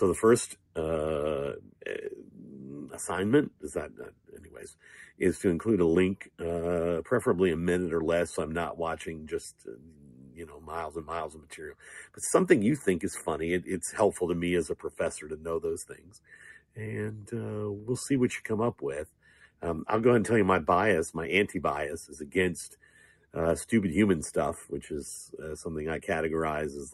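From start to finish the level keeps rising and falling by something like 10 dB, and held tones, ambience and decays are pulled down while sharp onsets come through, so the audio pumps, flutters or thins out. That is a noise suppressor applied to music or sounds: a processor built for speech was left on, and it reads anything steady or lingering as background noise to be reduced.

Eight passages sink deeper than the rest, by about 12 dB at their lowest: 0.54 to 0.77 s, 1.59 to 2.71 s, 3.5 to 5.21 s, 6.21 to 6.4 s, 9.58 to 12.2 s, 14.89 to 16.78 s, 19.07 to 19.62 s and 22.26 to 23.35 s. In each, the sustained or fading parts drop away or have their decay cut short. This is sound cut by the noise suppressor, which judged these stretches to be noise. The longest, from 9.58 s, loses roughly one and a half seconds in all.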